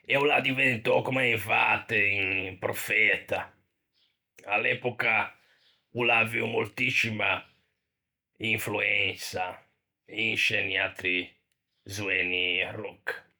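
No technical faults can be heard anywhere in this speech recording. Nothing in it calls for a timestamp or an explanation.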